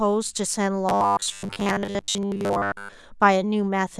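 From 0.89 to 2.97 s the speech turns into a rigid, metallic buzz pitched at 100 Hz that still loosely tracks the words: robotic sound from repeated short buffers. The likely cause is audio arriving too seldom, so a 10 ms stretch gets looped for most of that span while real audio is skipped.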